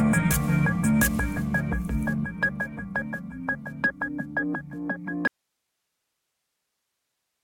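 A music clip that suffers an audio dropout to a faint residue at 5.27 s: the music cuts off abruptly and never returns, leaving only hiss far below the signal until the end. Unlike a fade or pause, nothing decays; the path likely stayed live after losing its source.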